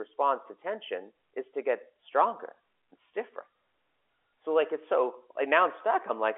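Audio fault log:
No faults turn up here, just the narrow telephone-band sound of a G.711 line, with nothing above 3.7 kHz.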